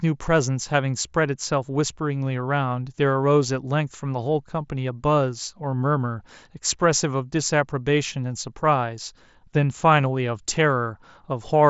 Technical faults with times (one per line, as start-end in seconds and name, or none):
none